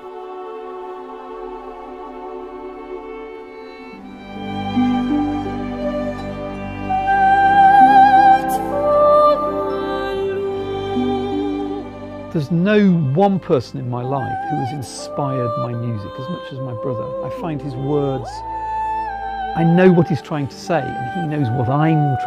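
No technical faults can be heard at any point in the audio.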